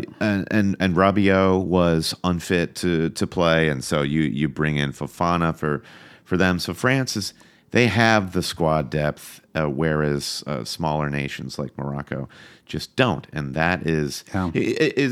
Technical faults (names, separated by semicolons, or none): none